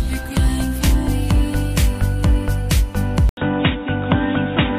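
At 3.29 s the sound drops out for about 80 ms, then returns dull and boxy with nothing above 3.8 kHz, at much the same level but with a faint new noise floor. This is likely an input switched to a poorer device, lasting to the end.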